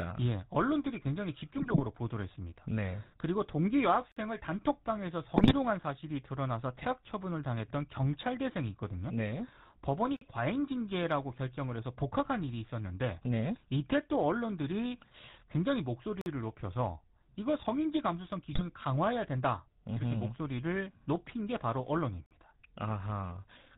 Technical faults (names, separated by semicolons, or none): GSM full-rate codec; GSM bit errors; gap between chunks